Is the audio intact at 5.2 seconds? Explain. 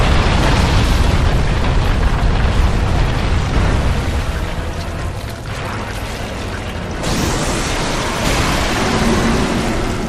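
No, a jitter buffer speed-up runs from 3.78 to 6.89 s: short pitch-period slices are repeatedly cut, roughly a fifth of a second in all, so the sound plays 7% faster and hurried at unchanged pitch.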